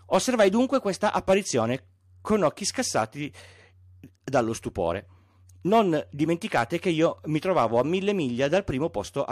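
No technical faults are audible.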